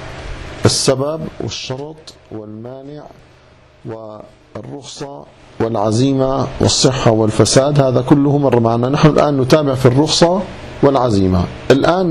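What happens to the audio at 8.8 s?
At 8.8 s the audio runs on intact, with no dropout, click, distortion or other fault at that point.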